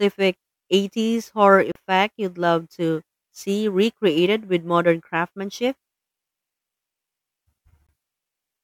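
At 1.72 to 1.76 s, just before "you'd love to see", the speech cuts to 35 ms of silence, and again for 20 ms at 7.87 to 7.89 s. A likely Bluetooth stall: the receiving buffer ran dry, and unlike a click or concealed packet loss, playback simply resumes.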